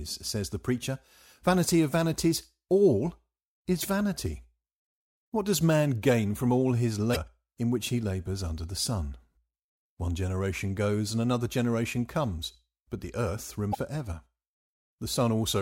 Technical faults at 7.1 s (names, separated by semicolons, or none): damaged data in a compressed stream